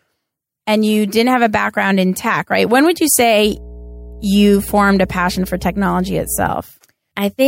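At 3.4 s a mains hum appears under the speech and holds until 6.5 s. It is a steady low tone at 60 Hz, sitting roughly 20 dB below the speech, produced when a ground loop or nearby transformer lets the power-line frequency leak into the signal path. Unlike low-frequency rumble or handling noise, which are broadband and shift over time, this hum has a fixed pitch and a constant level that ignores the speech.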